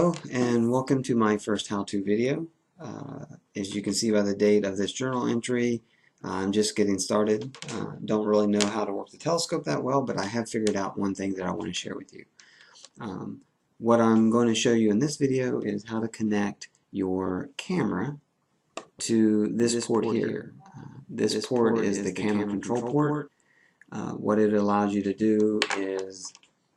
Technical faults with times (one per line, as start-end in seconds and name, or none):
19.60-23.28 doubled audio track